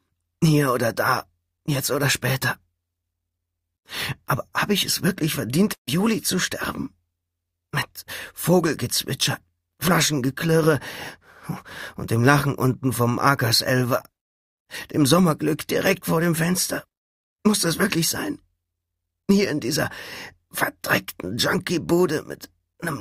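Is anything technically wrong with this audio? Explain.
Yes. A burst of packet loss at 5.73 to 5.89 s: several consecutive packets never arrived in time, so the receiver stretched the last sound to fill roughly 140 ms, fading it to silence for about 100 ms, and playback then resumes with that stretch of audio missing.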